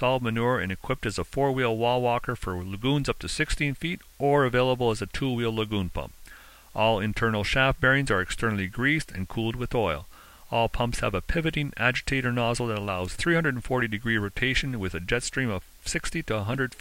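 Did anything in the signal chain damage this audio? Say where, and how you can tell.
Yes: sample-format conversion reduced this to low bit depth with dither, roughly 9 bits, leaving a steady, even hiss throughout, about 30 dB below the signal, with no distortion.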